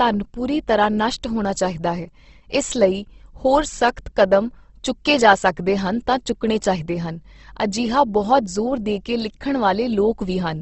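From start to finish the speech carries plainly audible damage that likely comes from Opus compression in its music (CELT) mode, at a rate that fits roughly 16 kbps. Nothing reaches above about 8.1 kHz, so the top end is capped at wideband. Starved bands are filled rather than left empty, which makes the sound grainy and rough with a noisy texture. There is less of the MP3-style swirling and fewer watery holes, and that is what sets this apart.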